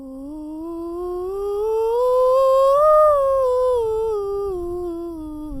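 From 1.69 to 2.96 s the music stutters: repeated stalls, eleven short jitter-buffer underruns, each up to 26 ms, bridged by repeating the last sound. Spectrograms show smeared, stretched columns. From 3.55 to 4.58 s a jitter buffer slow-down adds about 107 ms, playing at 90% speed, same pitch, its waveform showing repeated identical cycles.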